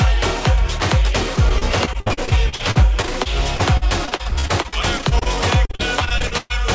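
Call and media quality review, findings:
Repeated packet loss (robotic sound), 1.36–5.27 s and 5.65–6.52 s: choppy stretches with pieces missing as the jitter buffer keeps patching holes by stretching the last sound. About a fifth of the first span is concealed, gaps up to 58 ms. The second is worse, around 40%, one gap near 124 ms. Nothing above 8 kHz, fitting a G.722-style wideband call path.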